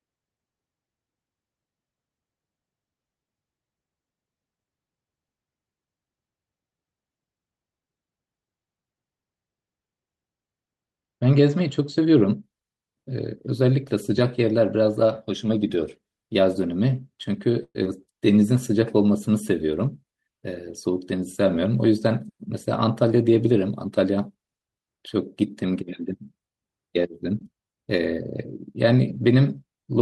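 A call audio freeze runs from 17.63 to 17.76 s. The sound stops advancing for 115 ms. The last sound is stretched into a fading buzz or hiss, and the final 40 ms or so drop to silence before the audio resumes exactly where it left off. Nothing is lost, but the delay grows by 115 ms. The likely cause is packets stalling in transit, so the jitter buffer ran dry and the receiver had to improvise until they arrived.

Short concealed packet loss follows at 17.84 to 17.86 s. About 40 ms of the signal never reached the decoder in time. Only 11 ms of that was patched by extending the preceding sound before blending back into real audio. The rest is simply skipped, cutting the delay by roughly 30 ms. It is heard as a tiny smear or wobble, with a sliver of sound possibly missing.

A jitter buffer speed-up spans 19.70 to 20.32 s. After the earlier hold-up the buffer was carrying more audio than its target. 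To bring the delay down, the receiver repeatedly cut out short pieces one or a few pitch periods long, removing roughly 70 ms in total. Playback runs at about 110 % of normal speed for that stretch while the pitch stays the same, so the speech sounds briefly hurried.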